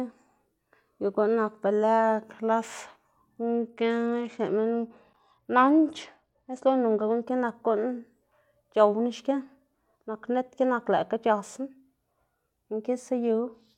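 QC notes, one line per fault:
3.45 to 7.24 s: Bluetooth SBC bit pool drop. The speech turns dull and gritty as upper sub-bands lose their bits, consistent with the bit pool falling from 31 to 12.
13.48 s to the end: Bluetooth SBC bit pool drop again. The treble dulls and grit returns, which fits a link squeezed to about 88 kbps.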